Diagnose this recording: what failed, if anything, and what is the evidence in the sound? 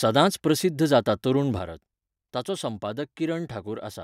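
A sudden gain jump occurs at 1.59 s, just after "प्रसिध्द जाता तरूण": speech and background noise drop together by about 7 dB and stay lower to the end. On the waveform the envelope steps down abruptly; a spectrogram shows every band dimming at once. The likely cause is a digital gain change in processing, applied without a ramp.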